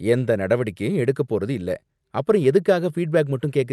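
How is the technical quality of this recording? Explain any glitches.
The technical quality of this speech recording is good, and there are no glitches to explain.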